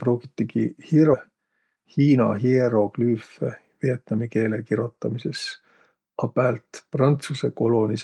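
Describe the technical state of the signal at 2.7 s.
At 2.7 s the speech is inside a jitter buffer speed-up that runs from 1.31 to 3.15 s. The receiver had built up more buffered audio than it wanted. To drain it, it cut out short pieces a pitch period or a few long, over and over. About a fifth of a second is dropped across the span. The speech plays at about 109% speed while its pitch stays the same, so it sounds hurried.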